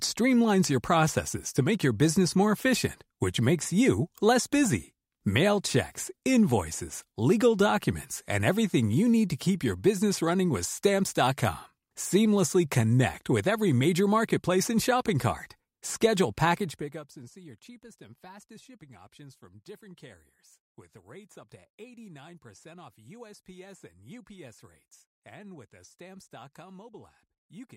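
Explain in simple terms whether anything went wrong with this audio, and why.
Zipper noise from 16.52 to 17.19 s, just before "see your cheapest and": the volume drops sharply in tiny jumps, about 200 per second, each adding a faint click that sounds like buzzing.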